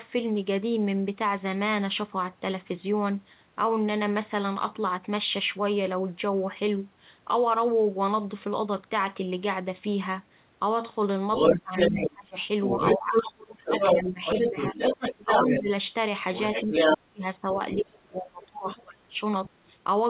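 It's a speech recording, and the trouble is all in the back half. The other side's voice is leaking through at 11.33–12.11, 12.64–15.63 and 16.35–16.98 s, sitting roughly 5 dB above the talker, then again more faintly at 17.75–17.98 and 18.42–18.81 s, around 10 and 20 dB under. That's a far-end voice off a loudspeaker getting back into the mic, likely because the echo canceller didn't fully remove it. Overlapping those same stretches there's speech suppressed in double talk. The talker dips by up to about 25 dB across 11.51–12.37 s, about 15 dB across 12.98–15.69 s and about 30 dB across 16.65–19.21 s, with the level pumping in and out as the other voice runs over it. The likely cause is the canceller failing to separate the two sides and turning both down together. All of it comes through the narrowband call link, with nothing above 4 kHz.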